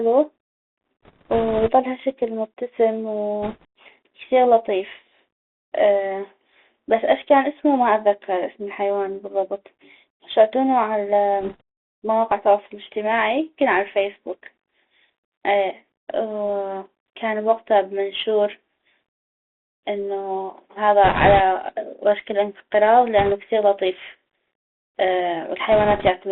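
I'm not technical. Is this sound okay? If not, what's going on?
No. The whole recording has gone through a Bluetooth CVSD headset codec, the basic system headsets use for calls. It squeezes the voice into a thin, phone-like band, so everything sounds boxed-in and muffled. S sounds come out scratchy, and a fine grainy hiss sits under the speech the whole time. Unlike a plain landline-style narrowing, which just sounds dull, this one adds that rough, gritty texture.

There are also six short patches of bit errors on a Bluetooth voice link, where the wireless signal was briefly corrupted: about 1.04 to 1.71 s, just before "هشكل مبتسم"; 3.42 to 3.65 s, right after it; 11.41 to 11.61 s; 21.04 to 21.41 s, the roughest one; 23.18 to 23.33 s, between "وشك الانقراض" and "كثيغ لطيف"; and 25.72 to 26.09 s. Each sounds like a burst of rushing, crackly noise over the voice, not sharp pops or gaps, which sets it apart from dropouts or clicks.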